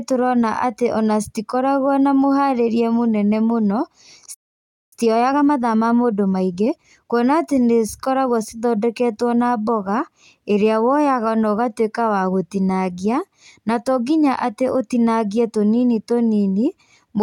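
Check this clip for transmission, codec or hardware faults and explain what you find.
Two related playback faults appear early in this speech clip: a playback stall followed by a stretch of time-compressed catch-up.

From 4.34 to 4.93 s there is a playback stall. The speech halts in mid-flow and the output goes silent for about 0.58 s. The likely cause is the player running out of buffered data or its audio thread being held up, so nothing reaches the output until it recovers.

From 4.93 to 7.23 s the player performs time-compressed catch-up to reduce the backlog the stall created. It removes short pieces of the signal and cross-fades across the joins, so the speech runs at 1.25 times normal speed for a little over two seconds. Pitch stays natural, which separates this from a simple playback-rate speed-up where voices would rise in pitch. The splicing leaves a hurried rhythm until normal pacing returns at 7.23 s.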